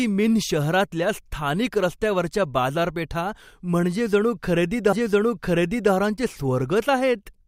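A speech recording with a stream segment repeated: at 4.92 s the playback jumps back and the preceding stretch of speech plays a second time, running to 5.92 s and adding exactly 1.0 s to the programme. A small blip marks the seam where the jump occurs. The player fetched or queued the same chunk twice. Unlike a buffer stutter, which loops a few milliseconds into a buzz, this repeats a whole intelligible second of speech.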